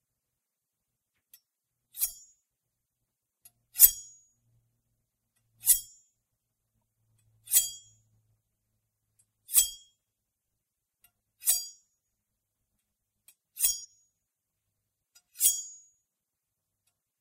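At 13.83 s the sound skips ahead with a brief glitch, likely a broken MP3 bit reservoir: after a cut, the next frame decoded another frame's bytes.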